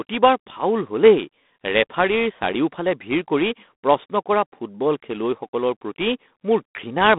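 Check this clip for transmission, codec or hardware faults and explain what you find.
One codec fault runs the whole clip. Throughout, the speech carries a harsh, rasping hiss that tracks its level, with nothing above 3.9 kHz. That is G.726 ADPCM coding at a coarse step size, which fits 24 kbit/s.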